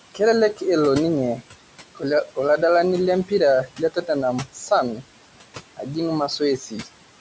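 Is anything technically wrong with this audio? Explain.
Yes. The speech carries two related faults from a noise suppressor working on room noise that sits about 16 dB below the voice.

Noise suppressor artifacts run throughout. The suppressor estimates the steady background band by band and pulls it down by about 18 dB wherever it judges noise dominates, frame by frame. The noise drops away in pauses and returns beneath the voice. On a spectrogram the background floor looks mottled and patchy, dark between phrases and speckled under them.

Speech cut by the noise suppressor occurs in four stretches: 0.12–0.62 s, 1.37–2.59 s, 3.25–5.03 s and 5.77–6.88 s. Here the suppressor mistook quiet parts of the speech for noise and attenuated them with the background, by about 17 dB at worst in the first stretch and about 15 dB in the others. Roughly 150 ms, 200 ms, and about 400 ms in each of the last two are affected, so the affected speech sounds swallowed or faint. 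The waveform shows shrunken segments. The spectrogram shows gaps carved into faint speech energy, beneath the clean ceiling near 8 kHz left by the call's microphone processing.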